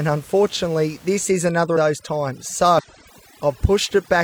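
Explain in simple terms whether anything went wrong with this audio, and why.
From 1.25 s to the end, the background is cleaned away too hard. This is overdone noise removal. A cleanup tool was set too strong. It shut off sound it judged to be background, and quiet parts of the voice went too. The faint room noise behind the voice is left as near silence with twinkling specks.

Two spots have compressed frames skipped, at 1.72 to 1.77 s and 2.74 to 2.85 s. Chunks of the compressed audio were missing or rejected as damaged. So the sound jumps ahead, by roughly 150 ms and 100 ms.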